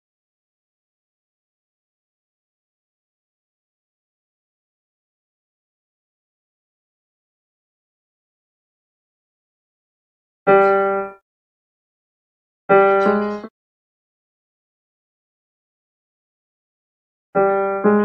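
No faults to report: nothing in the recording calls for a fix or a note.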